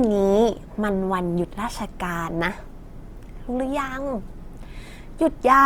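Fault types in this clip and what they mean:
Opus compression: the speech is plainly rough and grainy throughout, with band energy kept but fine detail swapped for noise-like fill, while the bandwidth still reaches 20.2 kHz. The likely cause is Opus in CELT mode, fitting a rate near 24 kbps.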